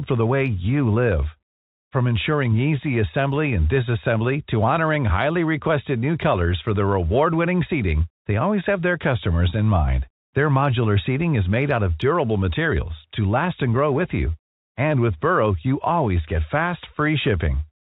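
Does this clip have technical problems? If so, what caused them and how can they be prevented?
No, there's nothing here to fix; the narrow, phone-line character of the speech is just what ordinary G.711 telephone coding sounds like, not a problem.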